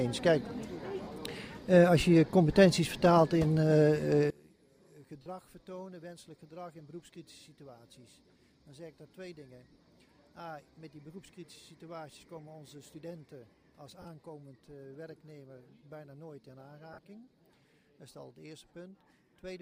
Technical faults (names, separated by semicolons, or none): lost LE Audio frames; one channel inverted